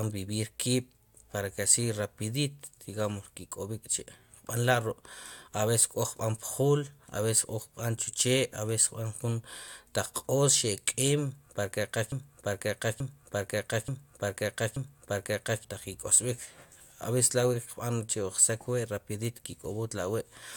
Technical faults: broken-record loop

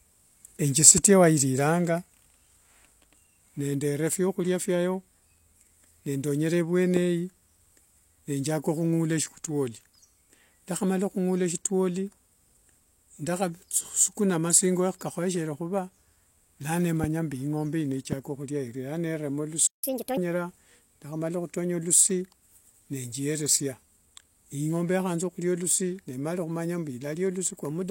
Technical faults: loud pop; playback stall; catch-up at higher speed

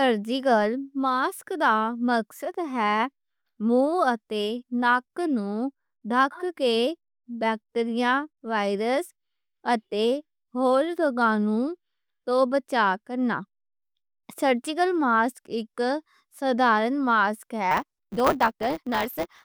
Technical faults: block size mismatch (truncated)

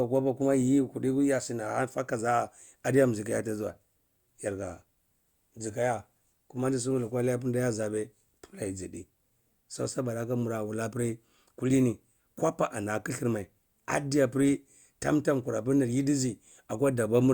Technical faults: none

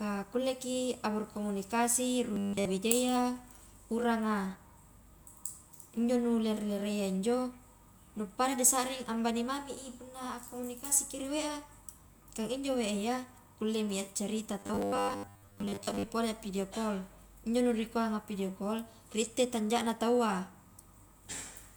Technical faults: robotic sound from repeated short buffers

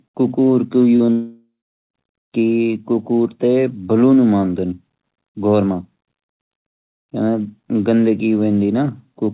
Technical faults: short concealed packet loss; long network dropout

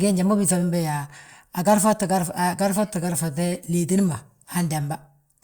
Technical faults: none

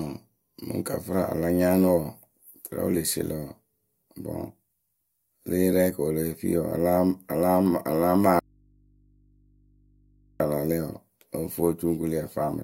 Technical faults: audio dropout to a faint residue

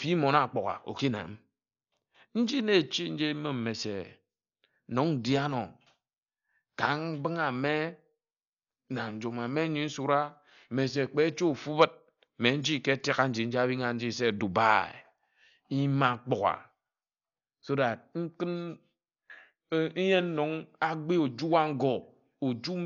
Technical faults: Dolby Digital compression

